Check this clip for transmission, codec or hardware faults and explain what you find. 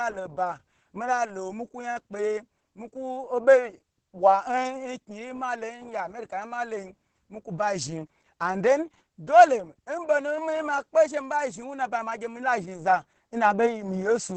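The speech carries one codec fault for its whole length: Opus voice compression. Its SILK linear-prediction coder, squeezed to roughly 10 kbps, models the voice coarsely, leaving it muffled, hoarse and slightly robotic. On a spectrogram, energy stops sharply at 8 kHz and the harmonics look smeared and blocky.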